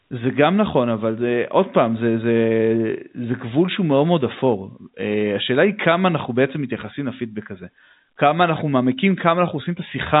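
No technical faults can be heard in this speech.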